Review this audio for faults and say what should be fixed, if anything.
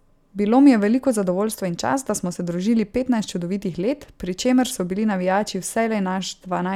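I found no faults in this audio, so nothing needs to be fixed.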